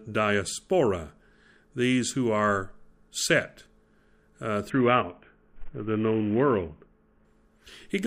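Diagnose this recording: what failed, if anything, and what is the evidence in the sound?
The codec stage failed. From 4.70 s to 7.25 s the speech dulls abruptly, its upper frequencies thin out, and a gritty, granular noise rides on what remains until the rate recovers. This points to a Bluetooth SBC bit pool drop: the link congested and the sender cut its bit budget from a normal setting to a starved one near 50 kbps, so the top sub-bands get few or no bits and the lower ones are coarsely quantised. A spectrogram shows a ceiling across that span, with the highs thinned and a speckled noise floor filling the remaining bands. The waveform looks roughened but keeps its envelope.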